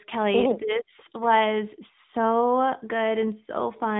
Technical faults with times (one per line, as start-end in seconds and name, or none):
0.00-3.99 AMR narrowband mobile codec